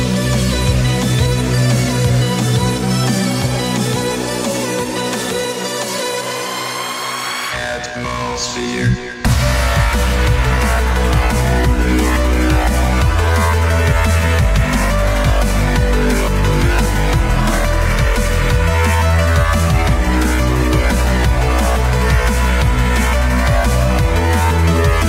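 No technical faults can be heard anywhere in this audio. Nothing in it calls for a time stamp or a cause.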